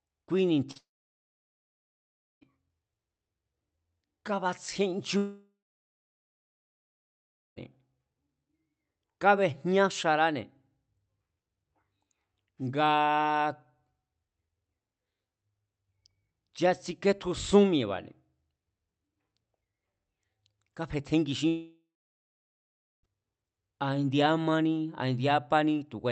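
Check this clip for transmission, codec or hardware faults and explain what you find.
Two kinds of transmission fault are audible in the speech: one short concealed packet loss and three long network dropouts. Over the call path, the upper band stops near 8 kHz, which fits an Opus stream at around 40 kbps.

Short concealed packet loss, 0.71 to 0.77 s: About 40 ms of audio failed to arrive, and the decoder bridged the gap by extending the preceding sound before blending back into the real signal. It comes across as a quick smear or wobble. On a spectrogram, the harmonics or noise texture look stretched flat for a few frames.

Long network dropouts, 0.77 to 2.43 s, 5.17 to 7.58 s and 21.48 to 23.09 s: Each one sounds like the speech breaking off into a brief fading buzz or hiss, then silence, before resuming further on with material missing. The likely cause is a stretch of packets that never arrived, with concealment giving up after somewhere between about 70 and 370 milliseconds. 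The silent portions last about 1.6 s, 2.0 s and 1.2 s. On a waveform, each appears as a decaying tail followed by a flat gap. A spectrogram shows a smeared band fading into an empty column.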